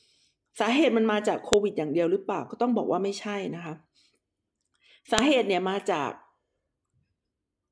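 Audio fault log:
1.53 s and 5.18 s: file header played as audio, sharp loud click where each joined piece begins, its leading header bytes reproduced as sample data.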